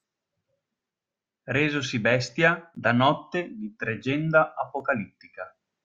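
No technical faults are audible anywhere in the speech.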